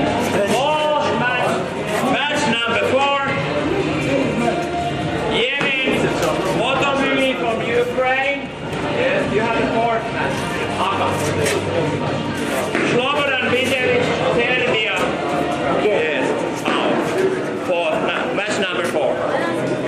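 Nothing technical stands out here; the audio holds steady all the way, with nothing to flag.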